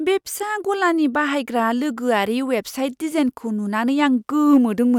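At 4.53 to 4.57 s, brief hard clipping: peaks exceed the stage's limit by about 1 dB and are cut flat, adding a short crackle.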